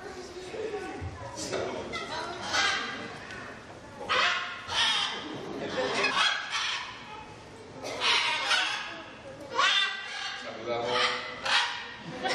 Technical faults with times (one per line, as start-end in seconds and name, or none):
6.10 damaged data in a compressed stream